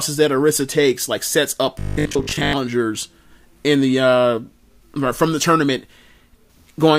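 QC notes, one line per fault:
1.79–2.53 s: robotic sound from repeated short buffers. The speech becomes a rigid metallic buzz pinned at 50 Hz, still loosely tracking the words. Likely caused by late audio, so one 20 ms slice loops repeatedly, replacing roughly 70% of the real signal.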